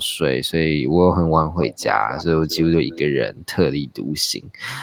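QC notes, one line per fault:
1.63–1.85 s, 2.42–2.67 s, 2.86–2.99 s: echo leak. Faint copy of the speech trails by 243 ms, about 15 dB down, likely loudspeaker pickup the far-end echo canceller failed to remove.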